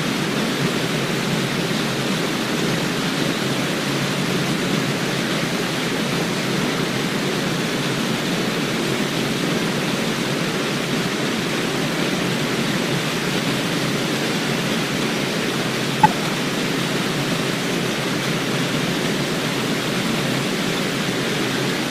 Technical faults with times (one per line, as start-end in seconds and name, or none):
11.78 corrupt frame decoded
15.98-16.11 corrupt frame decoded